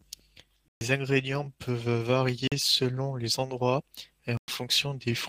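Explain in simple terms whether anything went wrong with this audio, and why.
Several things went wrong.

Clock drift between sender and receiver: the sending device's clock ran slow, roughly 4% slower than the receiving device's. The receiver was therefore always waiting for sound that arrived a little late, and its small holding buffer kept running low. Over the whole clip, the speech comes through slightly slow and uneven, with small timing hiccups scattered throughout.

Repeated timing corrections: to cover the shortfall, the receiver repeated tiny slices of sound from about 0.06 s to 4.62 s. Together these repeats add about a fifth of a second, so that stretch plays at about 96% of normal speed. Each repeat is very brief, so it sounds like slight stumbles and an unsteady pace rather than one obvious error.

Block of digital silence: at three moments the buffer ran empty, and the system filled the gap with pure silence. 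This happened at 0.68–0.81 s (128 ms), 2.48–2.52 s (about 43 ms, which fits a 2048-sample block), and 4.37–4.48 s (about 107 ms). The sound stops abruptly and restarts with no fade, leaving a short hole in the speech.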